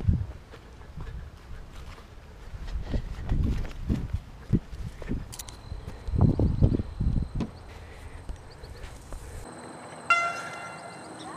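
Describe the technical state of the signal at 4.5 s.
At 4.53 s the sound jumps ahead by about half a second: compressed frames skipped, roughly five 92.9 ms frames left out.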